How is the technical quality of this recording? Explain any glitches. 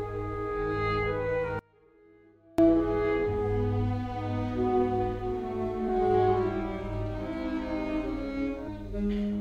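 The music has three audible glitches.

From 1.59 to 2.58 s the music collapses by about 32 dB to a faint residue. This points to one channel inverted, likely cancelling centred content when the channels sum to mono.

At 5.88 s and again from 8.66 to 8.68 s, brief chirps or blips cut through. This is damaged data in a compressed stream: the decoder misreads corrupted frames and resyncs at the next header.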